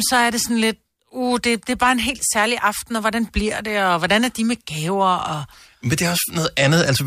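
No technical faults detected.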